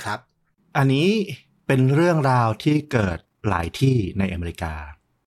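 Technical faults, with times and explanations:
2.6 to 4.25 s, overlap-add ripple: The speech takes on a fast, rough flutter, like a robotic tremolo. The level swings by about 6 dB, around 30 times a second. The audio was split into windowed frames and rebuilt with an overlap whose windows do not add up to a steady gain. Each frame boundary leaves a dip or bump in level. That regular pulsing at the frame rate is what the ear hears as flutter.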